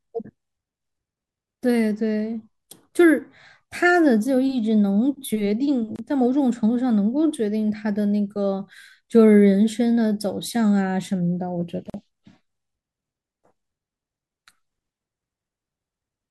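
At 5.96 s and 11.90 s, speech drops out for 28 ms and 43 ms. These are gaps at joins of encoded pieces. Untrimmed encoder padding leaves short silences with smeared edges.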